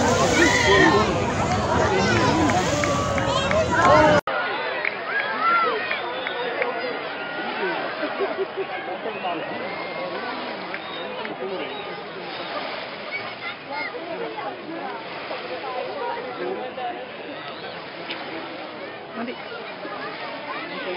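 At 4.19 s the recording likely switched its input to a poorer device, and the audio stays on that lower-quality path to the end. An 80 ms gap of silence marks the switch. From there the band stops near 5.1 kHz, so the sound turns dull and boxy. The level drops by roughly 10 dB, and a new background noise appears, sitting roughly 30 dB below the signal.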